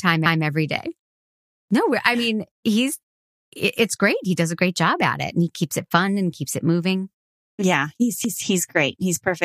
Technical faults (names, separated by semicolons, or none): repeated frames